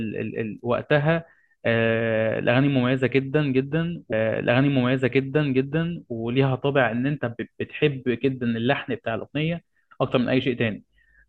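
At 4.12 s the speech jumps back and plays a stretch again. This is a stream segment repeated. The player fetched or queued the same chunk of the stream twice. The repeat runs from 4.12 s to 6.12 s, so about 2.0 s of speech is heard a second time. A small blip marks the jump back at 4.12 s. The clip runs 2.0 s longer than it should as a result.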